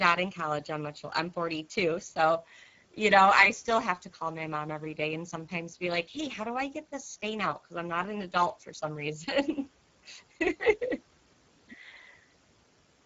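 From start to finish the speech has a rough, hoarse, noisy grain, and nothing sounds above 7.7 kHz. This is Speex codec damage: too few bits for the excitation, at a rate that fits roughly 10 kbps.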